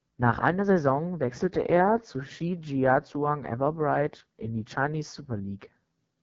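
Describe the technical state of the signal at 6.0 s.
At 6.0 s the speech carries AMR wideband (HD Voice) codec damage, which runs through the whole clip rather than starting or stopping here. The coder models the voice below 6.4 kHz with a pulse-excited vocal tract filter and substitutes shaped noise up to the band edge, with nothing above 7.5 kHz. The damage is heavy: the voice sounds rough and raspy, which points to the lowest mode, around 6.6 kbit/s.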